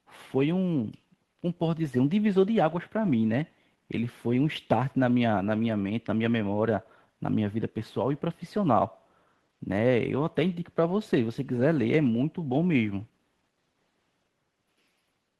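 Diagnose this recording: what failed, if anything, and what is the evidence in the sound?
No failure is audible anywhere in this speech recording.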